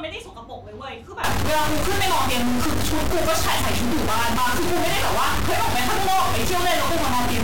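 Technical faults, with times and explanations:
1.24 s to the end, stuck bit: from 1.24 s the speech turns harsh and buzzy, and the pauses fill with a steady noise instead of falling quiet. This is likely one data bit held at a fixed value somewhere in the converter or its wiring. Roughly half the samples are pushed off by a step of around -20 dBFS, following the waveform. Small values near zero flip that bit with their sign, so even quiet stretches carry the noise.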